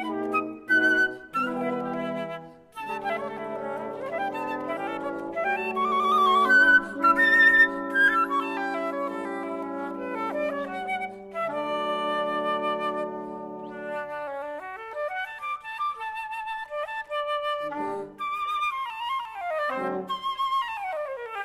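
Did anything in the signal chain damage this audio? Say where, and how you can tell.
No, nothing in the signal chain stood out as damaging this audio on listening.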